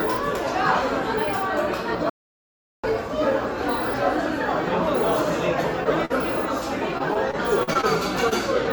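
From 2.09 to 2.84 s the sound cuts to silence for about 0.74 s, then carries on. This is a playback stall, most likely the player starving for data. It is a clean dead gap with no patched-in sound, unlike the losses that follow.

At 5.84 to 5.87 s a short concealed packet loss smears about 20 ms of missing audio into a brief smear. The receiver extended the preceding sound instead of leaving a hole.

From 6.05 to 6.12 s a burst of packet loss drops about 40 ms. The fill is longer than the smear and fades as it goes, so the audio resumes slightly further on.

Between 6.98 and 7.87 s, repeated packet loss (robotic sound) strikes seven times. The gaps total about 140 ms and the longest is 41 ms, so roughly 15% of the stretch is patched. The closely spaced fills give a choppy texture rather than a single blemish.

At 8.29 to 8.33 s another short concealed packet loss covers about 20 ms. It is an isolated brief smear, not part of a run.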